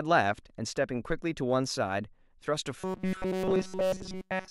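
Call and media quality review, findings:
Robotic sound from repeated short buffers, 2.80 s to 4.50 s: speech collapses into a rigid metallic buzz at 188 Hz, basically the whole stretch. Likely jitter-buffer underrun, with a roughly 5.3 ms chunk looped while fresh audio gets skipped.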